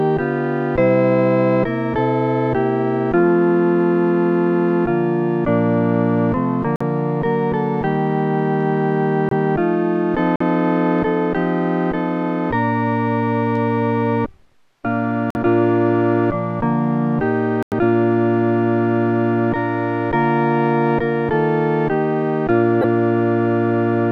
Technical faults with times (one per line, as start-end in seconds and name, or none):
6.76-6.82 corrupt frame muted
9.29-9.32 corrupt frame muted
10.36-10.41 corrupt frame muted
15.30-15.38 corrupt frame muted
17.63-17.73 corrupt frame muted
22.81-22.84 corrupt frame decoded